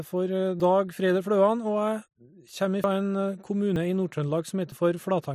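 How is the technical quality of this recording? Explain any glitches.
The speech jumps abruptly four times, each where the sound skips forward: at 0.6 s (about 70 ms missing), 2.84 s (the longest, around a tenth of a second), 3.76 s and 4.72 s (each roughly 40 ms). There is no gap of silence, just a splice where audio vanished. This points to a dropped buffer (overrun), likely where the recording software failed to collect samples before the hardware overwrote them, joining the two sides directly.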